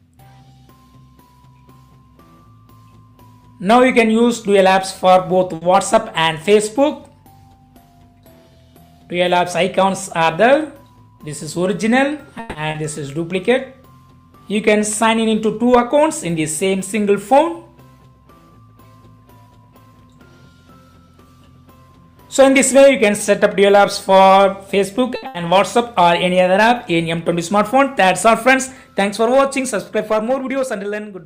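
The audio carries typical call-transport faults. A short stall from a late packet occurs at 5.55 to 5.64 s and 25.16 to 25.26 s. Each time, a packet arrived after its playout slot, the jitter buffer ran dry, and the receiver stretched the last sound by 60 ms and then 70 ms before resuming from the same point. Nothing is lost, but the sound hangs with a faint buzz. A jitter buffer speed-up happens four times. From 10.83 to 11.58 s the audio runs at 108% speed with roughly 70 ms trimmed. From 15.04 to 15.48 s it runs at 110% with about 50 ms trimmed. From 19.51 to 20.30 s it runs at 112% with around a tenth of a second trimmed. From 30.00 to 31.06 s it runs at 107% with roughly 70 ms trimmed. In each case the receiver cut out pitch-period-sized slices to drain excess buffered delay, so the audio sounds rushed at unchanged pitch. A call audio freeze at 12.40 to 12.58 s holds the last sound as a fading 150 ms continuation, which never drops to silence, before the audio carries on intact. 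This is likely caused by packets held up in transit that emptied the buffer. Short concealed packet loss at 12.71 to 12.78 s replaced 40 ms that never arrived with extrapolated sound, heard as a brief smear. A burst of packet loss at 25.27 to 25.38 s, directly after the second stall, loses 80 ms. The receiver fills it with a decaying continuation, and the audio resumes further on with that section gone.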